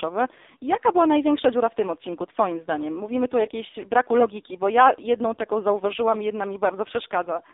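Throughout, the speech carries heavy AMR narrowband mobile codec damage. It is band-limited to roughly 300 Hz to 3.7 kHz, with nothing above, and its buzzy, synthetic texture from sparse excitation pulses fits AMR-NB near its low 5.15 kbps mode.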